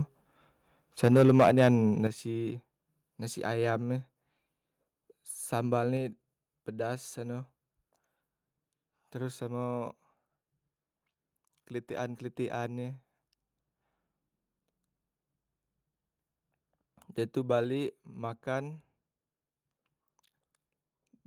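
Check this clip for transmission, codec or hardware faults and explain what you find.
Two faults are audible: a burst of microphone overload near the start, and three sudden steps down in microphone volume.

From 1.03 to 1.69 s the loudest speech peaks are flattened, with levels about 8 dB past full scale and roughly a tenth of samples clipped. The likely cause is input gain set too high for the converter. Unlike codec distortion, the harshness tracks the loud syllables and leaves quieter moments clean.

At 1.08, 2.07 and 5.97 s the voice and the background drop together, by about 4, 8 and 3 dB. This pattern is likely the call software lowering the device's input volume after detecting overload. The whole signal shifts at once, which separates these steps from a speaker simply turning away.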